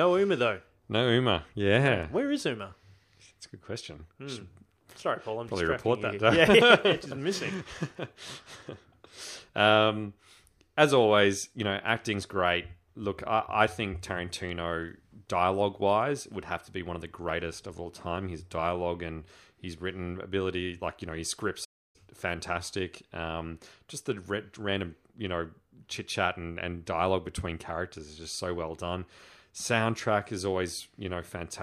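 The player likely ran short of buffered data, or its output thread was held up, so nothing reached the speaker from 21.64 to 21.96 s. This playback stall cuts the speech off right after "like you know his" for about 0.30 s of silence.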